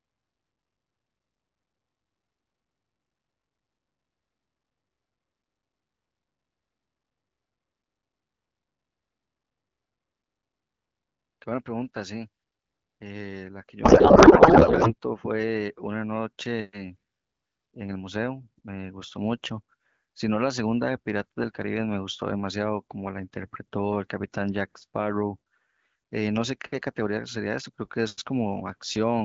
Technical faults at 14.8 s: codec payload misread

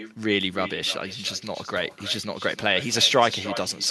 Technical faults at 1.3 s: echo with no canceller

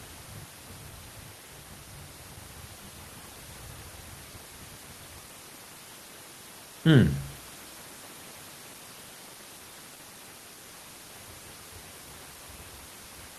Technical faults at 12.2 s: none

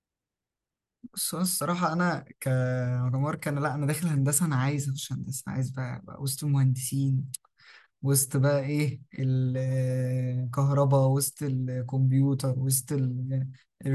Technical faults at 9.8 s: none

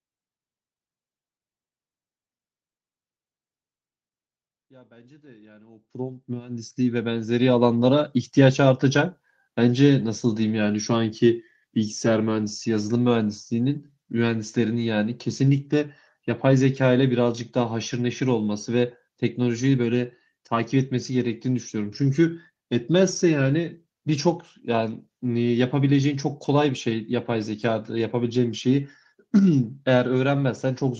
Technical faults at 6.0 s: automatic gain rising

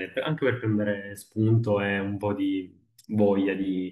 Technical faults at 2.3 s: none

